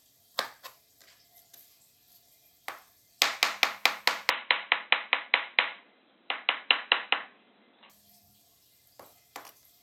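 From 4.30 s to 7.90 s the sound turns dull and boxy, with nothing above 4 kHz and a new noise floor sitting roughly 35 dB below the signal. The switch happens with no gap and no clear change in level. This is likely an input switched to a poorer device. On a spectrogram the upper band is cut off flat at 4 kHz for that stretch.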